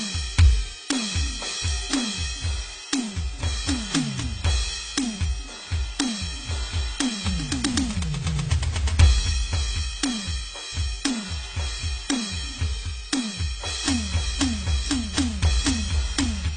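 A music clip that sounds dull and smeared from start to finish, with nothing above about 9.3 kHz and a warbling, fizzy texture on sustained notes. This is likely AAC compression, and the damage fits AAC-LC at a low bitrate around 24 kbps.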